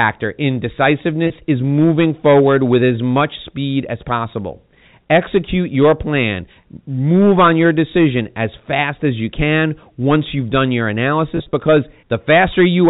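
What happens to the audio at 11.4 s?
Just after "once you've done your", from 11.37 to 11.53 s, packet loss with pitch repetition drops about 80 ms in short gaps, the longest 30 ms. The receiver repeats the last pitch period, producing a brief buzzy, held tone. On a spectrogram this shows as smeared, frozen harmonic stripes. The speech is also hard clipped, overdriven by about 10 dB. A small share of peaks are cut flat, giving crackle, flat-topped waveform peaks and harmonic haze reaching up to the 4 kHz telephone limit.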